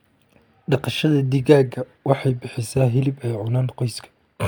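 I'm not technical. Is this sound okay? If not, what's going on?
Yes, nothing is wrong with this recording.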